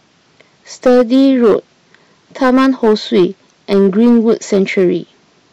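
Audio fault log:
0.86–1.56 s, hard clipping: peaks driven about 8 dB past the ceiling are sliced flat, and the squared tops throw harsh upper harmonics, a gritty fuzz on loud sound.
2.42–3.25 s, hard clipping: about 6 dB of overdrive flattens the peaks again, so crackle and buzzy edge ride on every louder moment.
3.72–4.88 s, hard clipping: with about 4 dB of overload, fewer peaks reach the limit, giving lighter crackle where the flattened tops add high-frequency distortion.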